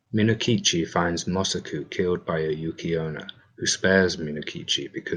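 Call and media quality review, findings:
No audible defects in the speech signal; level, continuity and bandwidth hold steady throughout, with nothing to attribute to capture, transport or playback components.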